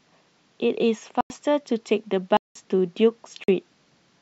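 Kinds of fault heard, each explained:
Block of digital silence: The speech drops to silence and returns with no fade, three times: 1.21 to 1.30 s (93 ms), 2.37 to 2.55 s (186 ms) and 3.44 to 3.48 s (46 ms). The lengths fit whole buffers of 2048, 4096 and 8192 samples at 44.1 kHz that were probably not filled in time. Packet-loss concealment would fill gaps with smeared sound and a fade would soften the edges, but these holes are dead silent with hard edges.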